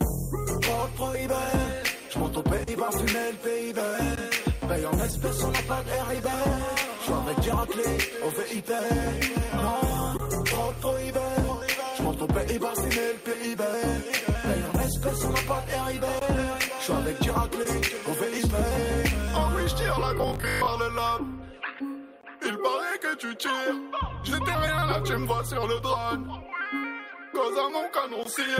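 At 2.63 s, about 40 ms of audio arrives too late for the decoder. This is short concealed packet loss: the receiver extends the preceding sound to bridge the hole, giving a brief smear. At 5.11 s a 20 ms loss is patched the same way. At 4.15 s the first gap between chunks appears. The audio is delivered in 6-second pieces and each join leaves about 20 ms of silence, which cuts a hard-edged hole in the sound. It recurs at 10.17, 16.19 and 22.21 s. Another 20 ms concealed loss at 17.63 s leaves a short wobble. From 20.18 to 20.68 s, new audio likely arrives too seldom, so a roughly 20 ms buffer is replayed in place of most of the real signal. This produces robotic sound from repeated short buffers, a rigid metallic buzz at 50 Hz. The last chunk gap falls at 28.23 s.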